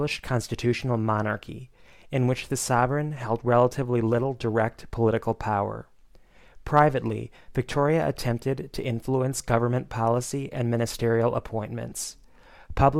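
Lost LE Audio frames appear from 11.90 to 11.92 s, a gap of about 20 ms near the end of the audio, which fits two consecutive 10 ms frames. The LC3 decoder filled it by repeating the last good spectrum with randomised signs, so for that instant tonal content becomes a short noisy smear rather than a clean dropout. The loss is too brief to fade toward silence. The lossy compression underneath is light.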